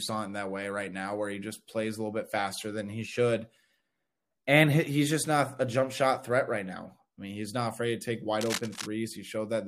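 From 8.41 to 8.87 s, after "not afraid to take", a scratchy rustle about 10 dB below the speech covers it: cable scratch noise, likely a worn connector shifting.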